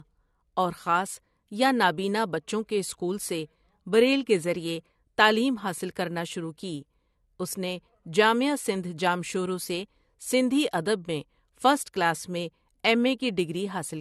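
Throughout the speech, nothing is heard above 12.2 kHz, and a smeared, swirly texture remains. That is the mark of low-bitrate audio saved at a high bitrate, likely a coarse AAC-type encode. The later high-rate MP3 adds nothing new but cannot restore the detail the first encode removed.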